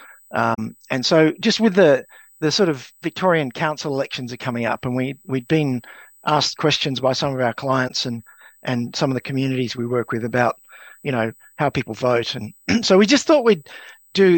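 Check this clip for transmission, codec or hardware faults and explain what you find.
Two faults are present: a steady USB whine across the whole clip, and two short dropouts from AAC frame loss with muting.

The USB whine runs from start to finish as a fixed-pitch tone at 8 kHz, strongest at its harmonic of 16 kHz, roughly 35 dB below the programme. The 8 kHz rate matches the bus's 125-microsecond microframes: the periodic current draw leaks into the audio through shared power or ground. On a spectrogram it shows as thin, unbroken horizontal lines at 8 kHz and 16 kHz.

AAC frame loss with muting causes two holes. The first, at 0.54 to 0.59 s, removes about 43 ms, which fits two lost frames. The second, at 7.88 to 7.91 s, removes about 21 ms, which fits one. The decoder zeroed the missing frames' spectrum, and its overlapping windows fade the sound out and back in, so each gap has soft edges. 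The waveform shows a brief tapered dip to silence, and the spectrogram shows a narrow vertical gap across all frequencies.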